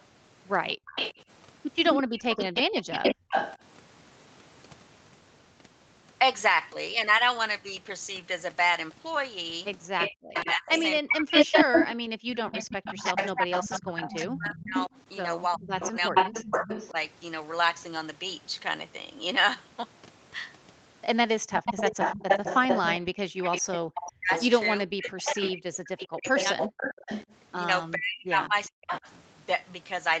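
Right from the start, 0.0 to 3.57 s, there's a delayed copy of the talker trailing about 210 ms behind, a bit quieter than the voice itself. That's an echo leak, likely from a loudspeaker on one side whose echo canceller didn't fully scrub its microphone. In that same stretch the room sound ducks briefly at 0.75 to 0.86 s, dropping by about 40 dB, and again at 3.15 to 3.29 s, by about 24 dB. That's background gated by the echo canceller, which clamps the mic while the speaker plays and then lets go. From 9.98 to 16.9 s the echo is back at about 373 ms and roughly as loud as the talker. Over 10.19 to 16.96 s the talker's voice also sinks deeply, around three seconds in total. That's speech suppressed in double talk, likely because the canceller couldn't tell the talker from the echo while both sides were going. At 21.53 to 29.12 s the echo leak returns at about 404 ms, a little below the voice. 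The room briefly gates again at 23.82 to 23.9 s, by about 21 dB. Double-talk suppression then pulls the talker down deeply across 24.18 to 28.92 s, about two seconds' worth.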